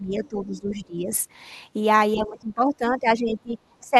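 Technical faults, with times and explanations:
0.00–1.11 s, 2.14–3.58 s and 3.81–3.96 s, speech suppressed in double talk: The speech dips sharply, by up to roughly 15 to 25 dB. The likely cause is an echo canceller confusing both talkers and turning everything down.
0.24–0.28 s and 0.69–0.74 s, other side's voice leaking through: Faint scraps of a second voice appear, roughly 25 to 30 dB below the speech. It is likely loudspeaker echo left in the microphone signal.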